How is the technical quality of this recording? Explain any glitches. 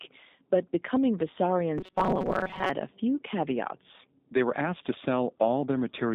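The recording is intelligible but noticeably degraded, with constant codec coloring and one robotic stretch.

G.729 codec, throughout: The sound is narrow, slightly rough and synthetic, fitting an 8 kbit/s coder. A spectrogram shows a band from 200 Hz to 3.7 kHz and nothing above 3.8 kHz.

Robotic sound from repeated short buffers, 1.78 to 2.71 s, just before "a few caveats": About half the audio becomes a metallic 188 Hz buzz, likely from repeating roughly 5 ms chunks. The waveform shows identical repeated cycles, and the spectrogram shows rigid, evenly spaced harmonics.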